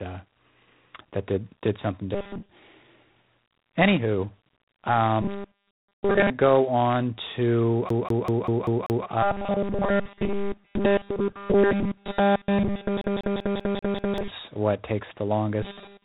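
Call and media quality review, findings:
G.726 ADPCM at 24 kbit/s, whole clip: harsh rasping hiss tracking speech level, nothing above 3.8 kHz; coarse adaptive-difference coding leaves audible quantisation noise.

Robotic sound from repeated short buffers, 2.15–2.49 s (most of span), 5.22–6.30 s, 9.23–14.30 s, 15.63–16.04 s: rigid 200 Hz metallic buzz, likely a 5 ms buffer replayed while fresh audio is skipped.

CD stuck on one turn, 7.89–9.06 s and 13.01–14.18 s: same 194 ms segment repeats six times each, muting briefly at every jump, giving a fast even stutter.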